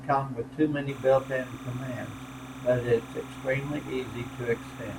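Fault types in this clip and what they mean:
Timecode bleed: from 0.89 s, right after "come with too many", until the clip ends at about 5 s, a steady chirping warble sits behind the speech. Linear timecode from a neighbouring track or cable has leaked into the audio path. The code is a square wave flipping between tones around 1 kHz and 2 kHz as its bits change, repeating at 30 frames per second, so it rattles along continuously at roughly 20 dB below the speech.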